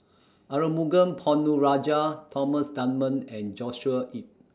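Nothing goes wrong anywhere in this bit of speech, so there's no technical fault to point to at any moment.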